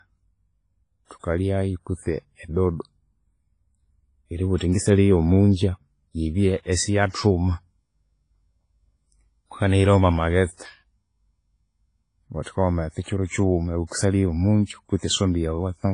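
WMA compression, likely the cause of the ringing, washy quality and signal-following hiss throughout this speech clip, leaves nothing above 10.4 kHz, which fits a low bitrate around 24 kbps. Pre-echo at 1.05, 1.19, 4.57, 7.11, 12.43 and 13.02 s puts a brief hiss of 31 to 56 ms just before sharp attacks, because coding noise spreads across the whole block into the quiet moment ahead of them.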